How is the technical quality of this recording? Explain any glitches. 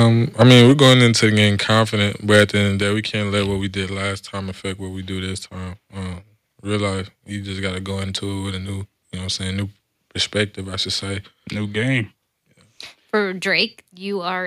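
The recording has a level-control problem: the loudest speech peaks distort in the first few seconds, and the input level then drops in audible steps.

Microphone overload occurs at 0.00 to 0.03 s, 0.41 to 0.94 s, 1.24 to 1.43 s and 2.34 to 2.41 s, the last just before "at the end of". The peaks run about 1 to 5 dB past the converter's limit, likely because the input volume is set too high for the converter. The flattened tops, up to several percent of samples in the worst stretch, give the loudest syllables a harsh, crackling edge.

Microphone volume stepped down at 0.72 s, at 2.82 s between "at the end of" and "day we can't let", and at 13.65 s. These are abrupt cuts of about 2, 5 and 2 dB, likely the call software lowering the device input after detecting clipping. Voice and background drop together, with no fade.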